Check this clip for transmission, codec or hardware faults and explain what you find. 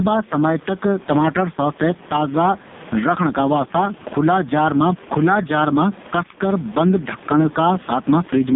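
Two faults run through the whole clip: gain pumping and heavy AMR narrowband mobile codec damage.

Gain pumping, throughout: the level breathes by around 10 dB, with loud and soft parts squashed closer together. The likely cause is gain set far too high with a fast limiter clamping it. On a waveform, the noise floor visibly rises between bursts and the peaks look flattened.

AMR narrowband mobile codec, throughout: the sound is buzzy and synthetic, with warbly, swirling texture in the background, which fits AMR-NB's lowest mode at about 4.75 kbps. It rebuilds speech from a vocal-tract model and sparse pulses. A spectrogram shows a band from 150 Hz to 3.7 kHz and nothing above, with smeared, blocky harmonics.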